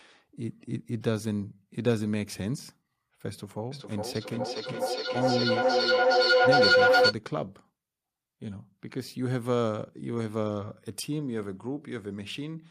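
A speech recording with a feedback howl from 3.71 to 7.18 s: a tone near 500 Hz swells to about 9 dB above the speech, pulsing roughly every 400 ms, as a microphone-to-loudspeaker loop keeps gaining level.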